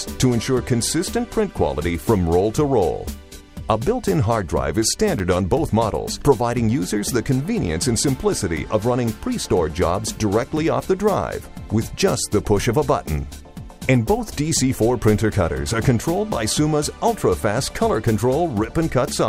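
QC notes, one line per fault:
5.18–5.20 s and 16.32–16.34 s, chunks out of order: at each spot a 10 ms block of audio plays one block later than it should, so two adjacent blocks swap places. No sound is lost, but the playback jumps ahead, steps back, then jumps forward again, leaving three hard joins where the waveform doesn't line up. Each one is heard as a brief jumbled stutter.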